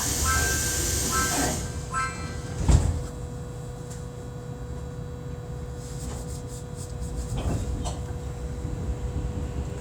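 Sound recording, no audible technical faults anywhere in the clip.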